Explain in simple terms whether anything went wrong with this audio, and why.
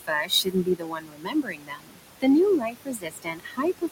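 Something did go wrong: a noise suppressor has processed this speech, and it left two kinds of fault.

The first is noise suppressor artifacts, present for the whole clip. The filter strongly pushes down the steady noise of the room, but it does this in small slices of time and pitch. The leftover background sinks between the words and rises under them instead of staying smooth. This differs from ordinary room noise, which would sit steadily under the speech; here the background keeps shifting.

The second is speech cut by the noise suppressor, from the start to 2.01 seconds and again from 2.58 seconds to the end. In these stretches the filter mistook parts of the speech for noise and turned them down along with the background. That adds up to about a second and a half in the first stretch and about a second in the second. Soft sounds and word endings come out swallowed or faint. This is not a dropout, which would be sudden silence: the speech is still there, just sunk down with the background.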